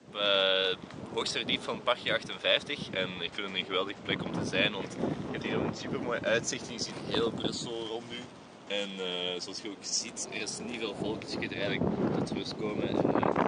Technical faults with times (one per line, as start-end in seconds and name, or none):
2.89-4.29 drift correction step
7.54-10.01 drift correction step
11.68-12.47 drift correction step